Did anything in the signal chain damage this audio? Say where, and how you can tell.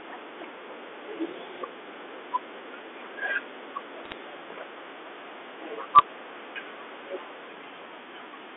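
Yes. The fault is bit errors on a digital phone line, in the network stage. Bursts of sharp ticks and crackle sit over unchanged speech from 4.05 to 4.14 s and from 5.93 to 6.02 s. Each flipped bit in the 8-bit mu-law stream corrupts one sample, and hits on a high bit, or on the sign of a loud sample, throw that sample far off, producing clicks at an error rate well under one percent.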